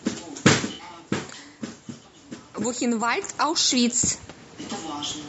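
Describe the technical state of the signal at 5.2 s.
At 5.2 s the speech sounds rough and grainy, with noise filling the gaps between pitch harmonics, as it does throughout the clip. This is likely low-delay AAC compression (AAC-ELD), whose short frames resolve harmonics poorly, and the damage fits a bitrate around 32 kbps.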